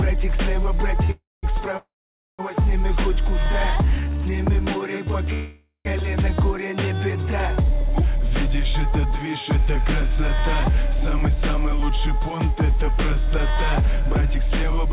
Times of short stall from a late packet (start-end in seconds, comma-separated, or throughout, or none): 1.04-1.11